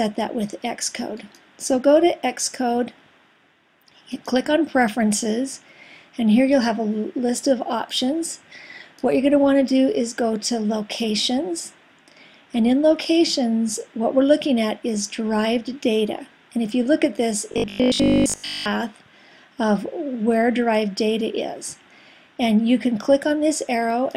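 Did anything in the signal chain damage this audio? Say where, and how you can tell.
Yes: robotic sound from 17.52 to 18.70 s, a rigid 50 Hz buzz, likely repeated short buffers in the driver, with 20 ms chunks looping over most of the audio.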